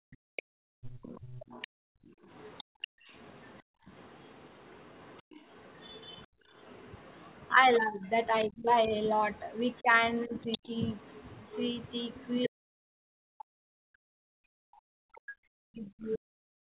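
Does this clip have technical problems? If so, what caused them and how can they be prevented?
Yes. Speech suppressed in double talk at 0.00–0.06 s, 6.29–6.37 s, 7.53–10.75 s and 12.47 s to the end. The talker dips by about 40 dB, about 25 dB in the long stretch, likely because the echo canceller misjudged overlapping talk as echo. Better double-talk detection and a more linear loudspeaker-to-microphone path would prevent it.

Background gated by the echo canceller at 0.34–3.88 s (about 1.5 s affected in total) and 5.23–5.34 s. The room sound drops by about 36 dB while far-end audio plays. Gentler residual-echo suppression with comfort noise would prevent it.

The other side's voice leaks through at 0.36–7.52 s, about 25 dB below the speech, and at 9.38–12.49 s, about 20 dB below. This is likely incomplete echo cancellation of the loudspeaker signal. A headset, or a canceller with a longer, well-converged filter, would prevent it.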